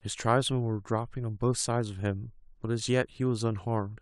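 Listening to the speech, nothing technically wrong stood out.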